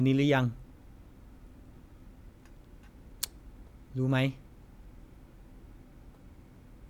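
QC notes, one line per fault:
No faults heard in this speech recording.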